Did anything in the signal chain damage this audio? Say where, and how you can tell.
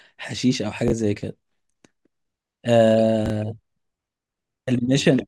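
Yes, there are two spots where the speech briefly scrambles, at 0.88 to 0.92 s and again at 3.26 to 3.30 s. Each sounds like a tiny jumbled stutter. That's chunks out of order, pointing at the buffer or packet-handling stage: a 20 ms chunk shows up one slot late and plays after its neighbour. No audio goes missing, but the swap leaves three hard joins.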